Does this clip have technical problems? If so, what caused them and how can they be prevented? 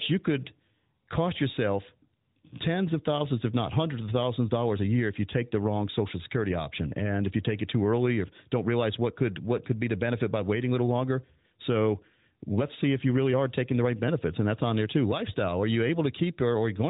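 No, this clip has no technical problems, so there is nothing to prevent.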